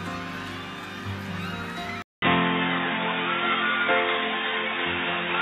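At 2.02 s the input was likely switched to a poorer device, after a 200 ms silence. From there to the end, nothing reaches above 3.8 kHz, so the sound turns dull and boxy, shifts in level by roughly 5 dB, and carries a new background noise well below the signal.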